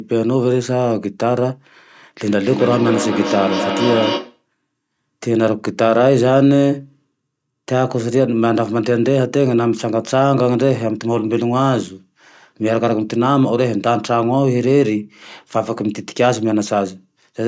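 Feedback echo between two devices, 2.22 to 4.45 s, in this speech: a second device replays the audio, the first device's microphone recaptures it, and the speech returns roughly every 300 ms, at most about 5 dB below it.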